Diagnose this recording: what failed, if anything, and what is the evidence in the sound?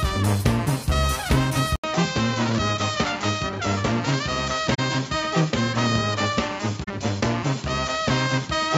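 At 1.76 s an 80 ms silence precedes a dull band capped at 7.6 kHz and a faint new noise floor. The input likely switched to a poorer device at the capture stage.

At the codec stage, the events at 4.74–4.79 s and 6.83–6.90 s are each a corrupt frame concealed by the AAC decoder, spanning roughly two and three frames.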